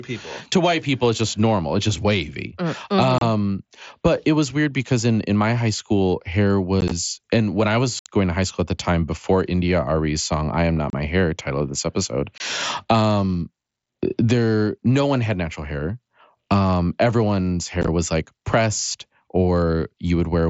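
Speech carried over a wideband mSBC headset link, with a light graininess on louder syllables, has unconcealed Bluetooth headset packet loss six times. There are abrupt silent holes at 3.18 s (30 ms), 6.81 to 6.91 s after "my high school hair" (scattered, 37.5 ms lost), 7.99 s (67.5 ms), 10.90 s (30 ms), 12.38 s after "title of this episode" (22.5 ms), and 17.82 to 17.88 s before "was like pressed" (scattered). The gaps fit whole 7.5 ms frames going missing between headset and phone. Unlike concealed loss, nothing is repeated or smoothed over the gaps, so the edges are abrupt.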